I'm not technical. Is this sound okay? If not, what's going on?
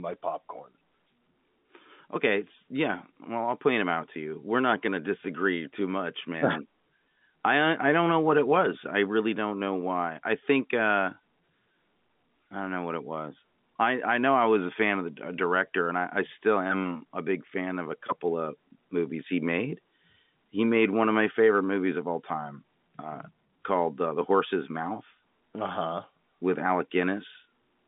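Yes, there's nothing wrong with this recording beyond the fact that it came over an ordinary landline telephone connection, so it has the normal narrow telephone sound with nothing above roughly 3.7 kHz, which is how an ordinary landline call sounds rather than a fault.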